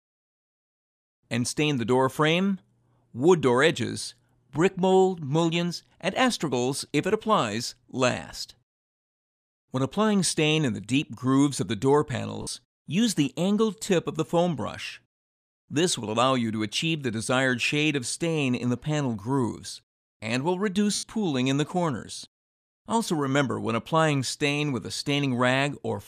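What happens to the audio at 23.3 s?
Nothing goes wrong at 23.3 s; the audio plays through that moment intact, with no dropout, click or other fault.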